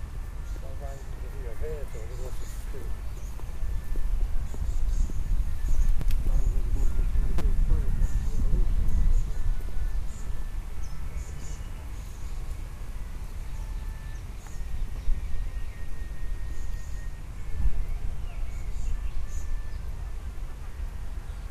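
At 6.01 s a repeated buffer plays one extra time, and from 7.38 to 7.41 s it plays four extra times. New audio arrived late, so the last roughly 5.8 ms block, which fits a 256-sample buffer, was played again. The first is a click and the second a brief buzz. Waveforms show identical copied cycles, and spectrograms show vertical lines at each hard join.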